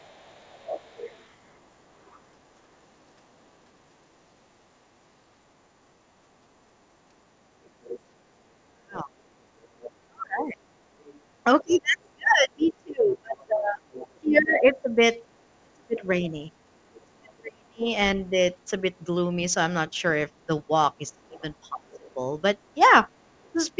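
From 0.0 to 2.2 s, a second voice sits faintly behind the talker, about 25 dB down. This is the other side's voice leaking through. The likely cause is a loudspeaker feeding the microphone, with the echo canceller leaving a residue. It returns from 7.65 to 8.0 s, about 20 dB down. It is heard again from 9.62 to 14.62 s at a similar level, then barely audible from 16.94 to 17.32 s, and from 21.3 to 23.52 s, roughly 30 dB down.

From 8.43 to 18.34 s, the talker's speech is suppressed in double talk. Both sides are speaking, so the canceller likely cannot tell the talker from the echo and ducks everything. The voice dips and drops out in pieces, at worst by about 30 dB. Around five seconds in total are affected. The same pumping returns from 20.47 s to the end, with dips of about 25 dB. Throughout, nothing is heard above 8 kHz, which fits a wideband call codec such as G.722.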